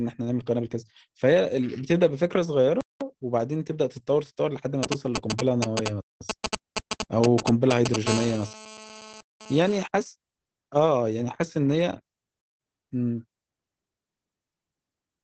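Throughout, the speech carries Opus voice compression. Nothing is heard above 8.6 kHz, and the muffled, hoarse, slightly robotic tone fits SILK coding at around 12 kbps.

At 2.81 to 3.01 s, a gap between chunks cuts a 200 ms hole, after a roughly 3 s chunk.

From 4.83 to 7.96 s, GSM signalling bursts appear. A nearby 2G phone's radio pulses are rectified into galloping ticks and brief 217 Hz buzzes, about as loud as the speech.

At 6.01 to 6.21 s, another 200 ms gap between chunks follows, three seconds after the first.

From 8.07 to 9.76 s comes GSM phone buzz. A steady, raspy 217 Hz buzz rich in harmonics sits about 11 dB below the speech, from a phone transmitting during a call.

At 9.21 to 9.41 s, a third 200 ms gap between chunks falls within that buzz.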